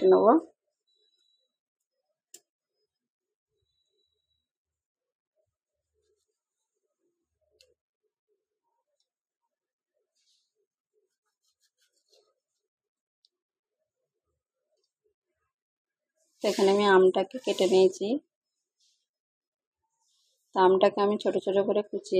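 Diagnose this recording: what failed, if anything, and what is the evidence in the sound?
Nothing failed; no stage shows any audible defect.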